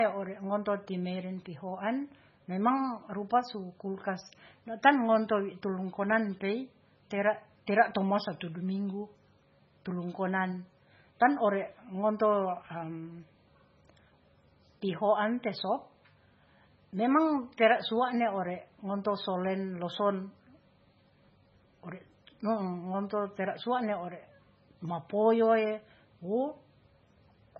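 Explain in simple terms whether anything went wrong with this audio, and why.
MP3 compression damage runs through the whole clip. The speech sounds watery and swirly, with nothing above 7.5 kHz, likely because a very low-quality MP3 encoding cut the treble and dropped quiet details, which then flicker in and out.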